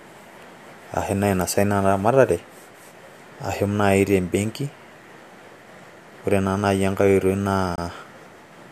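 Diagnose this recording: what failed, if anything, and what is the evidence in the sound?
A gap between stream segments at playback: from 7.76 to 7.78 s the speech drops to hard-edged silence. The waveform shows a flat line and the spectrogram a clean vertical blank band. Two 4-second segments' timestamps leave about 22 ms uncovered, which the player fills with silence without losing audio.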